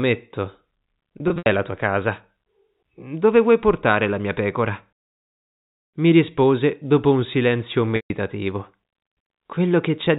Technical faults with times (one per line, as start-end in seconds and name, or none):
1.18-1.46 packet loss with pitch repetition
7.96-8.10 packet loss with pitch repetition